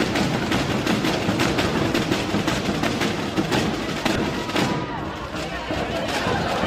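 Corrupt frame decoded at 2.52 to 2.56 s and 4.14 to 4.20 s: damaged bits in a couple of compressed frames misplace energy, giving fairly loud glitches.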